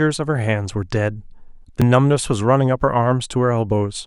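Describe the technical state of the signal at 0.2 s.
At 0.2 s the signal is intact, with no audible fault at that moment.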